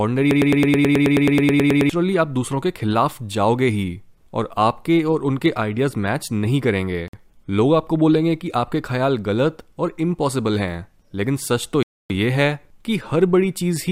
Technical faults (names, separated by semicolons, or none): broken-record loop; Bluetooth stall